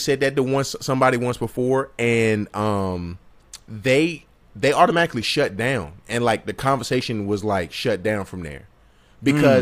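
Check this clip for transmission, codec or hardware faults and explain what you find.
No transmission, codec or hardware faults are audible in this speech recording.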